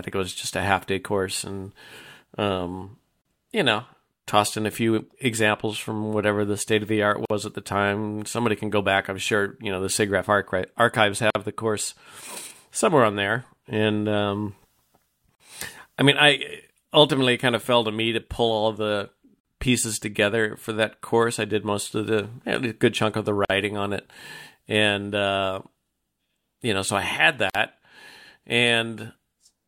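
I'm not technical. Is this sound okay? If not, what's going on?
No. There's a gap at a join of encoded pieces every 4 seconds: tiny silent dropouts of about 40 to 50 ms at 3.22, 7.25, 11.30, 15.35, 19.40, 23.45 and 27.50 s, for example right after "state of the art". Someone stitched separately saved chunks together and left their built-in silent padding in.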